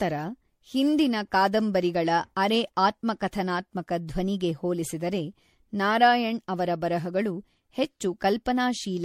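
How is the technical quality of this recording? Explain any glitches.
The technical quality is poor throughout. The speech carries heavy, cumulative codec damage from start to finish. There are no isolated glitches.

The fault is generation loss, and it lasts the whole clip. The sound is swirly, smeared and hollow. Consonant attacks blur, and nothing survives above 16.5 kHz. The likely cause is repeated lossy re-encoding, perhaps around seven passes, in a chain pointing to MP3 at about 64 kbit/s. Each pass requantises on a shifted frame grid. Noise and spectral holes stack up beyond what one encode would leave.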